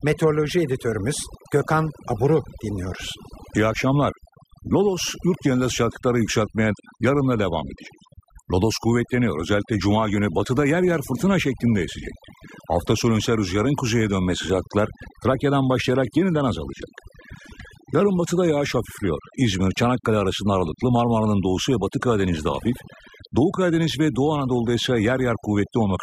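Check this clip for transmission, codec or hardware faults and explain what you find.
Overdone noise removal runs throughout the speech. Reduction set too strong mutes bands near the noise estimate, leaving twinkling specks in silence.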